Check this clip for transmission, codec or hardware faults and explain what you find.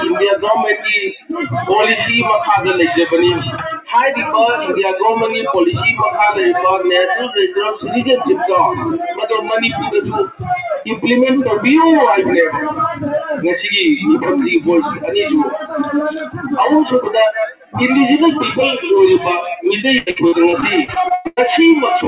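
Yes, there are a few things going on, mostly from a speech noise suppressor left running on non-speech audio, plus a burst of packet loss near the end.

Noise suppressor applied to music or sounds, throughout: the suppressor treats steady, sustained material as noise, so levels keep pumping by around 5 dB and tails thin out.

Sound cut by the noise suppressor, at 1.11–1.32, 9.13–9.52, 10.79–11.04, 12.93–13.37, 15.52–15.76, 16.11–16.52, 17.47–17.76 and 19.49–19.65 s: held or decaying sound gets clamped, dipping by about 7 to 18 dB and cutting decays short.

Repeated packet loss (robotic sound), 19.98–21.39 s: about a dozen holes, the longest around 0.11 s, get filled by stretching the previous sound. That leaves roughly a third of the stretch choppy.

The dull top end, with nothing above 4 kHz, fits a G.711 A-law call codec.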